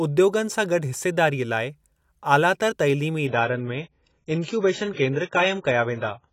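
At 3.27 s the adaptive stream switched to a lower bitrate and stayed there until the clip ends. The connection appears to have slowed, so the player swapped to a leaner encoding without any gap. The speech turns abruptly dull, with nothing above 7.6 kHz, and takes on heavier codec artefacts. The sound points to an AAC stream dropping from around 96 kbit/s to around 16 kbit/s.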